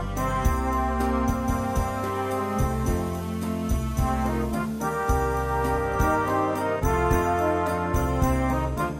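At 1.24 s the receiver loses its digital stream and spends 300 ms cross-fading to the FM broadcast of the same station, a case of digital radio blending to analogue. Until 6.01 s, when it blends back, the audio sits about 1 dB lower and carries steady hiss roughly 30 dB down. That smooth, gradual handover with its added noise floor distinguishes it from an abrupt dropout or a codec glitch.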